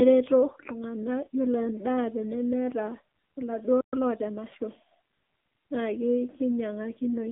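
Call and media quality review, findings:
AMR narrowband mobile codec, throughout: speech confined to roughly 200 Hz to 3.7 kHz, nothing above 3.7 kHz, heavy buzzy, synthetic coloration. Pulse-excited vocal-tract model at a low mode, which fits AMR-NB around 6.7 kbps.

Playback stall, 3.81 to 3.93 s: output drops to silence for 120 ms mid-flow, then resumes. Likely cause is a jitter-buffer underrun or a blocked audio thread.

Time-compressed catch-up, 3.93 to 4.41 s: speech runs 1.25 times fast at unchanged pitch. The player drains its backlog by excising short segments and cross-fading the joins.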